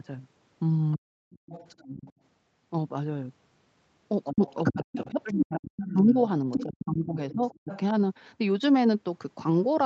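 Right at 0.96 to 1.15 s the talker's speech drops out hard, something like 40 dB down, which is likely speech suppressed in double talk: the echo canceller couldn't tell the near talker from the far-end voice on the loudspeaker and ducked everything. From 1.31 to 2.13 s there's a faint second voice underneath, about 20 dB below the speech, likely the other side's voice leaking through because the canceller left some loudspeaker sound in the mic.

The messy stretch starts at 4.25 s. That leak comes back much stronger and runs to 6.85 s, only about 5 dB under the talker, so it's almost level with them. Over the same span the talker keeps getting chopped. There's a short dip from 4.32 to 4.41 s of about 20 dB, then a long patchy one from 4.75 to 6.26 s that cuts around 35 dB deep and eats roughly a second of speech in pieces. Both are likely the same double-talk suppression, with the canceller clamping down while both sides talk at once.

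Another round of suppression runs from 6.57 to 7.94 s, again around 35 dB deep and taking out something like 0.7 s in fragments. Inside it, from 7.31 to 7.79 s, the far voice bleeds through again at about 15 dB below the talker.

All of this sits on a call path whose top end stops at 8 kHz.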